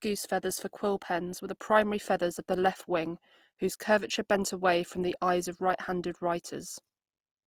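Throughout, the speech sounds grainy and rough, likely Opus compression in music mode, patching starved bands with noise; the texture fits about 24 kbps.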